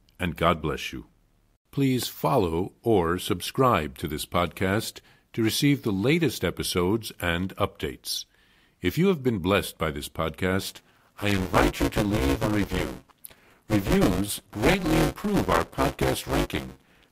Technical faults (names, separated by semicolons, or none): buffer tearing